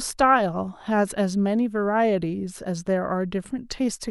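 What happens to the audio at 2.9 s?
At 2.9 s the audio is intact, and the speech continues without any audible fault.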